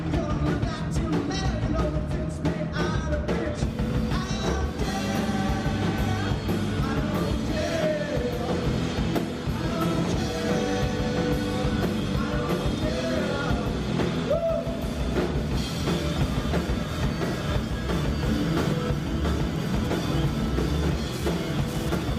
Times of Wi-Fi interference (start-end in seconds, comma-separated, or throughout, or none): 19.48-22.18